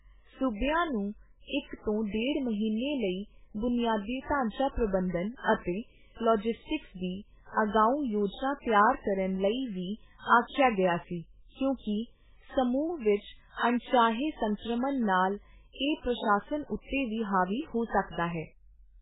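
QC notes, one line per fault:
Throughout, MP3 compression: the encoder was likely starved of bits, so it cut everything above 3.8 kHz and zeroed the weaker frequency lines, letting them flicker on and off from frame to frame. The damage is heavy, which points to a very low bitrate, around 8 kbps. The speech sounds dull and muffled, with its upper sibilance gone, and a watery, swirling texture runs through it, with consonant onsets smeared.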